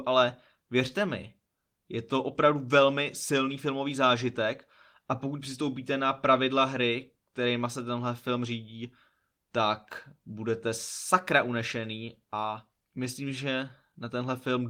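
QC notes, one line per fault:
The speech has no technical faults; it is carried by Opus voice compression at 24 kbps in hybrid mode, which keeps the full audio band and leaves only a light trace of coding.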